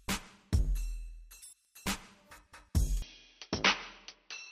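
At 3.02 s the sound abruptly goes duller and stays that way until the end. Everything above 6 kHz disappears, so the top end that was there a moment earlier is gone. The switch happens with no gap, the level stays about the same, and a faint new noise floor comes in well underneath the signal. That combination points to an input switched to a poorer device, likely a narrower-band mic or headset taking over mid-recording.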